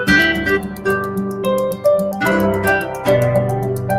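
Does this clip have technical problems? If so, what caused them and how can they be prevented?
Yes. A noise suppressor applied to music or sounds stays active through the whole clip, treating steady tones and decays as noise. Level swings by around 10 dB; attacks pass while sustains sink, unlike a compressor, which tames peaks. Disable speech-oriented suppression for non-speech material.

The suppressor also cuts specific sounds it judged as noise: from 0.6 to 0.86 s, dipping about 6 dB, and from 1.08 to 1.42 s, about 5 dB. Held portions fade early rather than dropping out abruptly as in a dropout. Bypass suppression or use a gentler setting.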